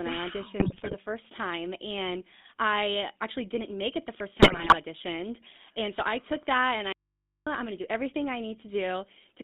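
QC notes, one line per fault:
Throughout: GSM full-rate codec. The whole clip has that gravelly, buzzy edge you get when the vocal tract is modelled and excited by a sparse pulse train with most of the excitation thrown away. The damage is plainly audible. The band sits at roughly 200 Hz to 3.6 kHz, so there's no air or sibilance on top and thin low end, and the sound fits a 13 kbps full-rate stream.
0.6–0.95 s and 4.42–4.75 s: GSM bit errors. Two short bursts, each about a third of a second, where the decoded sound turns to squawks, pops and gargling. Corrupted filter, pitch and gain parameters are being decoded as if valid, so the spectrum warps and the level jumps frame by frame. Both bursts fit a few percent of bits flipped across a string of consecutive frames.
6.93–7.47 s: audio dropout to a faint residue. The signal cuts out abruptly for about 0.54 s and comes back just as suddenly, mid-flow, so it's not a natural pause or a fade. 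What's left in the gap is low mains hum sitting around 55 dB below the normal level. That points to the source likely being lost upstream while the rest of the chain stayed live, leaving the open input's hum exposed.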